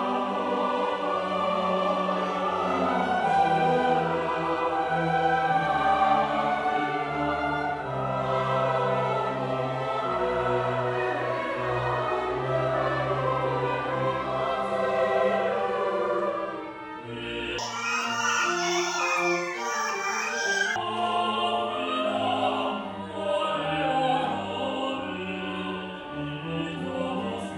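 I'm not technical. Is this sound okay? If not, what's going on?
No. From 17.58 to 20.76 seconds the sound runs twice as fast and a full octave higher. That is a wrong sample rate: it was played back at double the speed it was recorded at.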